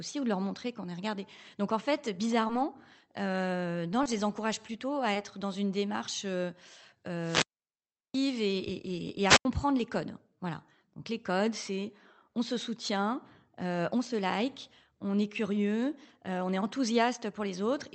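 At 2.47–2.51 s just after "en fait", 4.03–4.07 s before "les encourage plutôt à", and 5.13–5.17 s, short concealed packet loss leaves about 20 ms gaps filled with extrapolated sound. Each is heard as a brief smear and shows on a spectrogram as blurred, stretched harmonics. From 7.19 to 8.23 s, a wireless microphone squelch dropout lets the radio signal fade until the receiver mutes. Hiss rises, then comes about 0.73 s of near-flat waveform before "et et et"; a shorter dropout at 9.26–9.45 s mutes about 0.09 s. Throughout, the call codec's spectrum stops sharply near 8 kHz.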